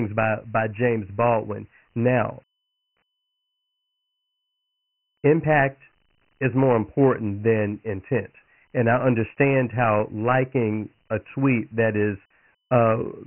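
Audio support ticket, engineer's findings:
Dialogic VOX ADPCM path, whole clip: coarse 4-bit steps, consistent with 24 kbps at 6,000 samples a second. Nothing above 3 kHz, heavy codec damage, gritty hiss trailing the speech.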